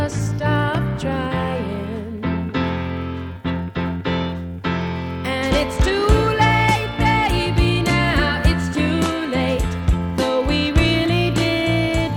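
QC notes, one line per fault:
No faults heard anywhere in the clip.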